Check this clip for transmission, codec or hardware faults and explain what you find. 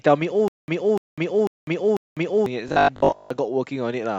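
Two playback faults are present, both in the first three and a half seconds.

From 0.48 to 2.46 s, a stalling stream likely retried four times, replaying a 295 ms fragment followed by 200 ms of dead silence every 0.50 s. This is a stutter with silent gaps, and the audio between repeats is lost.

From 2.68 to 3.30 s, audio likely arrived too seldom, so most of it was replaced by a repeated 20 ms buffer. This robotic sound from repeated short buffers imposes a rigid 50 Hz metallic buzz.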